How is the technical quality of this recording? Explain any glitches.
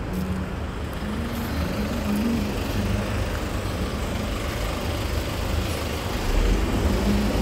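The recording's technical quality holds up, and there are no glitches to explain.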